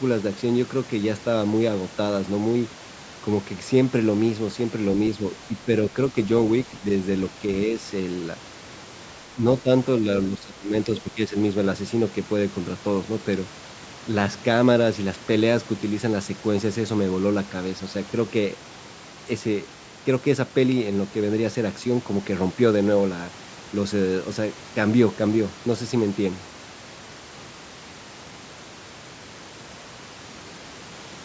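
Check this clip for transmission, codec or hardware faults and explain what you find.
One fault appears: speech suppressed in double talk, at 5.48–5.68, 9.34–9.45, 9.62–9.70 and 10.30–11.35 s. The speech dips from about 5 to about 15 dB, likely because an echo canceller could not separate this side's talker from overlapping loudspeaker echo and turned both down. The voice dips, loses its high end or cuts out in pieces.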